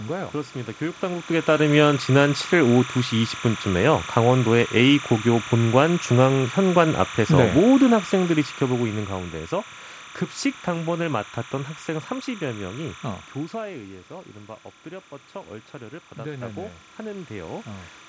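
Running under the whole speech recording is timecode bleed: linear timecode leaking from a neighbouring line produces a steady chirping warble that sits around 15 dB below the speech. The code's square wave flips between tones near 1 and 2 kHz, and its framing repeats at 29.97 frames per second. On a spectrogram this shows as two persistent horizontal bands around 1 kHz and 2 kHz, with a fine, regular texture. They continue through pauses where the speech energy vanishes. From 7.91 to 9.48 s there is automatic gain falling. The gain control judged the input too loud, or its background noise too strong, and eased its gain down by about 8 dB over roughly a second and a half, so the speech and the room background sink together rather than the talker simply getting softer. In the waveform the envelope tapers steadily across that span, and the noise floor between syllables drops along with the peaks. 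From 16.15 to 17.76 s the reverse happens with automatic gain rising. After the input fell by about 12 dB, the control pushed its gain up by about 5 dB, so the speech and background swell together while only partly recovering the lost level. The waveform shows a gradual ramp upward in both the peaks and the quiet gaps over that stretch, and a spectrogram shows the room noise brightening at the same rate as the speech.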